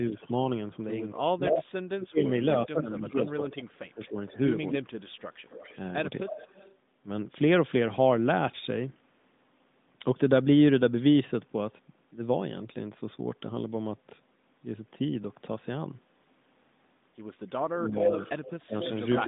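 Right at the start, 0.10 to 0.16 s, the talker dips by roughly 5 dB. That's speech suppressed in double talk: the echo canceller likely couldn't tell its own talker from the far end coming out of the loudspeaker, so it ducked everything. Straight after, 0.17 to 0.46 s, there's a faint echo leak, a copy trailing by 256 ms at about 25 dB under the voice. The far end's canceller likely let some of its loudspeaker pickup back into the mic.

From 1.14 to 4.16 s the suppression gets heavy. The voice is pushed down, about two seconds' worth in total, with drops as deep as roughly 35 dB. Overlapping that, 1.5 to 6.75 s, the echo comes back stronger, delayed 263 ms and about 15 dB down, so you hear a double behind the speech.

At 4.84 to 5.21 s the background gets gated by the echo canceller. The room tone dips about 13 dB for a moment, roughly 300 ms of it, then comes back once the canceller lets go. 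At 6.24 to 6.33 s there's another quick double-talk duck of around 10 dB.

At the tail, 17.61 to 19.23 s, the echo leak is loud, only about 5 dB below the voice, at a 287 ms delay. From 17.77 s to the end, the double-talk suppression knocks roughly 0.4 s of speech down by up to about 15 dB. All of this sits inside the narrowband AMR phone band, nothing above 3.8 kHz.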